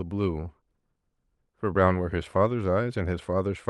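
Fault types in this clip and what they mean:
No faults can be heard in this speech recording.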